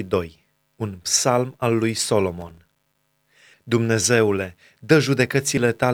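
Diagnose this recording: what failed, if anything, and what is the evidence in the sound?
The driver or buffer stage failed. The processor fell behind and missed dozens of buffer deadlines again and again, each only a few milliseconds long, and each miss was filled with silence. That shows up as processor overload crackle, a gritty tearing over the speech from 2.40 to 2.98 s.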